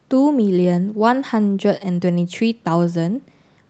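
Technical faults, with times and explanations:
Nothing stood out on listening to this speech recording.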